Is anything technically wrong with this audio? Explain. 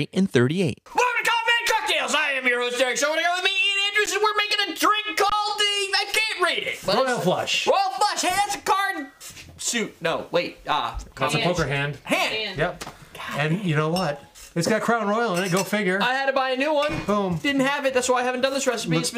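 Yes. At 4.06 s and again from 5.30 to 5.32 s the sound briefly freezes flat, then resumes softly with nothing missing: an underrun with held sample, where the converter holds its last value while the buffer sits empty. The first gap, about 12 ms, fits a 512-sample buffer.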